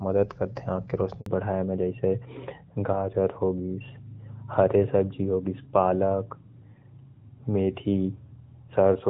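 A speech recording that goes briefly dead at 1.20 s: the sound drops away and stays silent for about 60 ms, a handover gap where no frames arrived while the call switched networks. From 1.26 s to the end, everything above 4 kHz is missing and the voice turns duller and rougher, a fallback to narrowband as the call left the clear HD Voice (AMR-WB) coding for an older narrowband codec, likely AMR-NB near 12.2 kbit/s.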